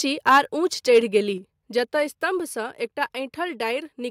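Speech with microphone overload at 0.28–0.39 s and 0.95–0.98 s, where the loudest peaks, about 5 dB and then about 2 dB over the ceiling, are likely sheared off at the converter. The waveform shows flattened tops on roughly a tenth and then about 7% of samples, and the spectrogram shows crackly broadband smear. At 0.38 s the microphone volume steps down by 3 dB, likely the call software reacting to that clipping. It shows as an abrupt narrowing of the waveform envelope and an even dimming across all spectrogram bands.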